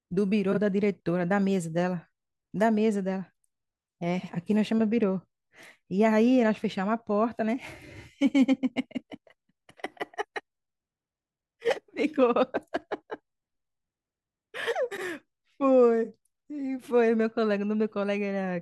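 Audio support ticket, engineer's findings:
Frames out of order, 0.52–0.58 s, 4.19–4.29 s, 14.91–15.02 s: decoder playing adjacent blocks of about 23 ms and 46 ms swapped, giving brief garbled flutter. Waveform/spectrogram shows three abrupt discontinuities per swap, no gap.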